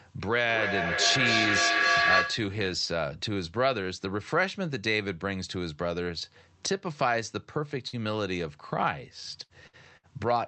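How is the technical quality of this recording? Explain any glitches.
The recording has two clear problems: a loud howl near the start and a cluster of short dropouts near the end. The audio came through a call codec, with the top end rolled off around 8 kHz.

From 0.38 to 2.65 s there is a feedback howl: a piercing tone at about 1.5 kHz, peaking about 4 dB louder than the speech and pulsing roughly every 0.3 s. Two devices in the same room were on the call, so the sound kept cycling from loudspeaker to microphone with more gain on each pass. The loop's preferred frequency built up into a tone, and the pulsing follows the loop's delay.

At 7.87, 9.43, 9.67 and 9.97 s, a burst of packet loss causes a brief stumble. Each lasts about 90 ms: a short held buzz or fading hiss, then the sound jumps ahead. Packets went missing or arrived too late, so the receiver stretched out the last sound and faded it for about 60 ms. 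When playback resumed, roughly 60 ms of the original audio had been skipped.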